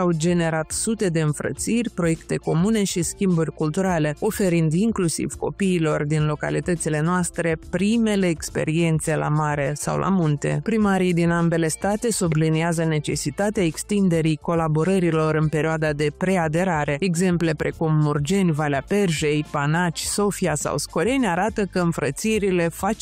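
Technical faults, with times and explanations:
No technical faults are audible anywhere in the recording.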